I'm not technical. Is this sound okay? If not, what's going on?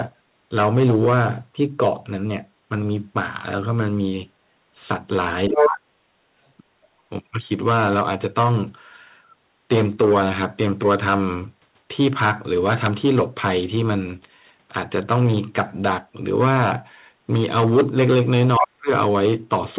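No, there are two brief glitches. At 5.49 to 5.91 s and again at 18.58 to 18.89 s, the talker's voice nearly vanishes for a few tenths of a second. This is speech suppressed in double talk. Both people were likely talking at once, and the echo-cancelling software played safe by turning everything way down.

Inside that first dip, from 5.56 to 5.69 s, a second voice pops through, briefly even louder than the talker. That's the other side's voice leaking through: the far end was coming out of the loudspeaker, and the echo canceller likely didn't scrub it all from the mic.

The dull, phone-like sound with no crisp top end is just the ordinary call line doing its normal job.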